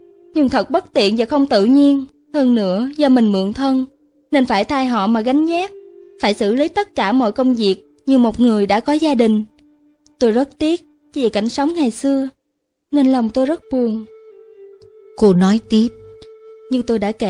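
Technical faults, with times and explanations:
Listening through the audio, nothing stood out as a technical fault at any point.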